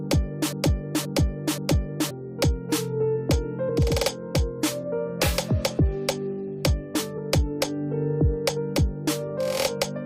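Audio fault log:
0.00–2.11 s, broken-record loop: a playback or streaming stage most likely stalled and kept resending the last fragment it held instead of fresh audio. The loop is already running when the clip opens, and a 0.53 s piece of sound repeats exactly, back to back, three times before normal flow resumes at 2.11 s. Because the repeats are identical, they form a mechanical stutter, and whatever should have played during those two seconds is missing.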